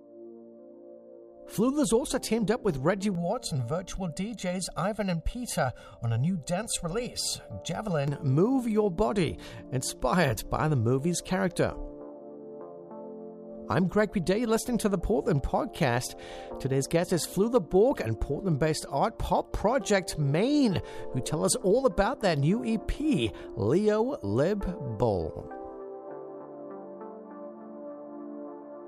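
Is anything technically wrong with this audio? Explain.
Yes. Channel delay (comb filtering) from 3.15 to 8.08 s: one channel arrives about one and a half milliseconds late, and summing to mono cancels shared content at evenly spaced frequencies, starting near 300 Hz. The audio sounds hollow and phasey, with fixed spectral notches.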